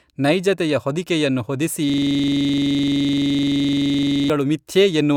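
From 1.9 to 4.3 s, a rough 23.4 Hz stutter-buzz replaces the speech: a system hang loop replaying one 42.67 ms buffer dozens of times, which fits a 2048-sample buffer.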